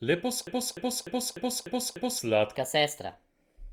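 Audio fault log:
0.47–2.19 s, broken-record loop: A fragment of about 0.30 s plays back to back six times, with each repeat identical, so the sound stutters mechanically in place. The source most likely stalled and kept resending its last buffered piece, and the audio for that span is lost.
2.55 s to end, section at the wrong speed: This final stretch runs 1.27 times too fast, so pitch rises together with tempo, by roughly four semitones, and the speech turns high and hurried. The likely cause is playback or editing against the wrong clock rate.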